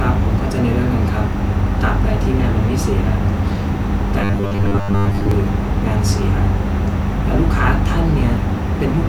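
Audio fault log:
4.22–5.31 s, robotic sound from repeated short buffers: speech turns into a rigid metallic 100 Hz buzz. Likely caused by repeating a 10 ms buffer through most of this stretch.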